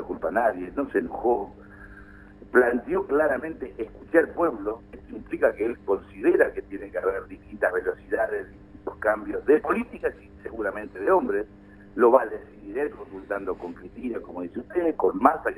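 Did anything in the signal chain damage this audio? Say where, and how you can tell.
Yes. The damage happened at a converter stage, where the sample rate was raised by straight-line interpolation, showing imaging from linear upsampling throughout. The genuine band ends near 6 kHz, which fits a 12 kHz original rate converted to 44.1 kHz. Above it, a faint mirrored copy of the spectrum fills 6 to 12 kHz, about 40 dB below the signal. The linear interpolator filters too weakly, so the top is dulled while that leftover image adds a thin metallic shimmer to bright sounds.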